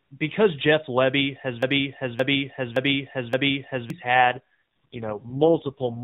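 From 1.63 s to 3.90 s a broken-record loop takes over: a 0.57 s fragment plays four times back to back, and whatever should have come in that span is gone. The likely cause is a stalled player or stream resending its last buffer. The waveform shows identical blocks repeating, and the spectrogram shows the same pattern of stripes recurring at regular intervals.

From 4.14 s to the end comes an AMR rate drop. The narrowband band stays capped at 4 kHz with no gap, but the sound turns buzzier and more synthetic, consistent with the codec stepping down from 12.2 to about 4.75 kbps. On a spectrogram the harmonics become smeared and blocky, with less fine detail below the cutoff.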